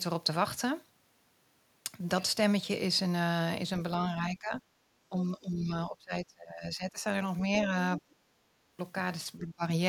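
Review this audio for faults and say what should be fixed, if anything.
The speech gets pushed down at 4.05–4.61 s, 5.09–7.04 s, 7.98–8.05 s and 9.39–9.63 s, dipping by up to about 25 dB. That's likely speech suppressed in double talk, where the echo canceller ducks everything while both sides talk. Better double-talk detection in the canceller should fix it.

There's also a faint scrap of the other side's voice leaking through at 8.11–8.15 s, about 35 dB under the speech. That's likely loudspeaker echo the canceller missed. A stronger residual-echo stage would clean it up.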